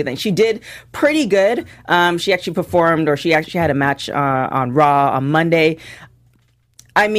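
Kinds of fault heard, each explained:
Nothing stood out on listening to this speech.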